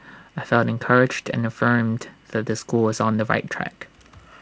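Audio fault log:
No audible faults found.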